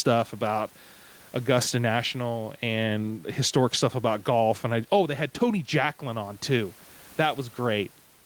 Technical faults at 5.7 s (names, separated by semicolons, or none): none